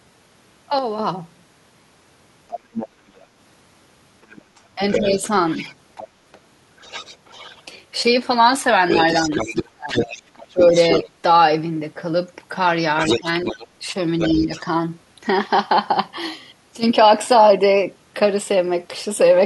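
The clip is speech with three kinds of fault. From 0.79 to 0.99 s the level steps down by 6 dB and comes straight back. That is one channel dropping out, most likely one stereo channel lost before the mono sum. A gain dip would ramp; this one is a flat step with hard edges on both sides, and the drop matches the loss of half of the shared signal. Other side's voice leaking through is heard as a second voice under the talker at 2.49–3.19 s (about 10 dB down), 4.23–7.62 s (about 20 dB down), 8.89–11.08 s and 12.99–14.61 s (both about 5 dB down). The likely cause is loudspeaker playback that the echo canceller did not fully remove. Room reverb would only trail the talker's own sound, but this is a separate voice with its own timing. Speech suppressed in double talk follows those overlaps. The talker's voice sinks by about 5 dB at 4.78–5.21 s, by about 10 dB at 13.2–13.58 s and by about 5 dB at 14.3–14.51 s. 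The worst case is 9.28–11.11 s, with drops of up to about 25 dB, some 0.7 s of it affected. This is likely the echo canceller turning everything down when both sides spoke. It differs from the channel dropout because the dips are uneven and of varying depth, and they occur only while the other voice is present.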